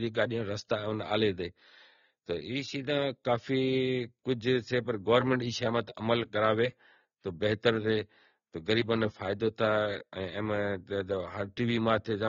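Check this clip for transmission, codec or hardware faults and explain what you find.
One codec fault runs through the whole speech clip. AAC compression: nothing above 6.9 kHz, with smeared, warbling sibilants, likely from AAC-LC starving bands at a rate fitting about 24 kbps. Unlike a simple low-pass filter, the fizzy texture is audible.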